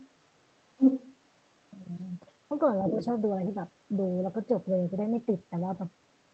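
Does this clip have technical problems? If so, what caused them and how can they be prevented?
Yes, there's another voice leaking through underneath the talker in three places: a faint scrap from 0.0 to 0.1 s, a strong burst from 0.77 to 1.16 s that's actually louder than the main speech, and a shorter patch from 2.86 to 3.06 s just below it. The likely cause is the far end playing on the talker's loudspeaker and the echo canceller not fully removing it from the mic. A headset, or a better-tuned echo canceller, would prevent it.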